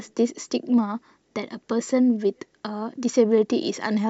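No technical faults can be heard anywhere in the recording, and the signal stays continuous and intact throughout.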